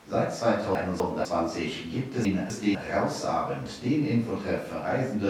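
Twice the speech lurches into a jumbled moment, first between 0.75 and 1.25 s, then between 2.25 and 2.75 s. Each is a case of chunks out of order: a 250 ms block of audio arrived one chunk late and was played after the block that should follow it. Nothing is missing, but the swapped pair leaves three abrupt joins per event around the garbled half-second.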